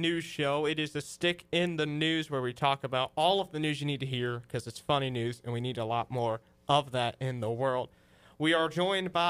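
No technical faults can be heard anywhere in this audio.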